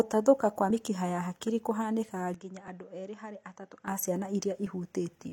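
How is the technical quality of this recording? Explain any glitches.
The speech recording has two kinds of fault: repeated segment-overlap skips and a stretch that sounds like a lower-quality input.

Overlap between stream segments at 0.70 s, just before "mĩkiha ya hakiri", then 2.68–2.70 s and 4.67–4.70 s, after "a ciana". Overlapping segment timestamps, roughly 2-second segments, make the player trim real audio, causing brief skips.

From 2.34 to 3.88 s, ending just before "a ciana", the sound turns duller and around 10 dB quieter, with nothing above 7.7 kHz and a faint new noise floor. The likely cause is the input being switched to a poorer device.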